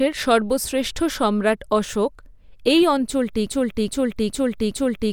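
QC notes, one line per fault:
3.47 s to end: broken-record loop. A fragment of about 416 ms repeats exactly, back to back, four times until the clip ends, and the speech that should follow is missing. This is likely a stalled player or stream resending its last buffered fragment.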